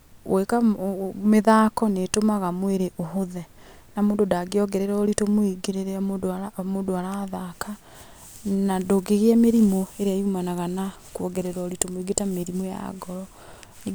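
Nothing goes wrong in this speech recording: there are no dropouts, glitches or other technical faults to point to anywhere along the way.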